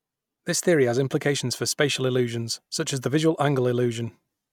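Speech recording with no audible technical faults.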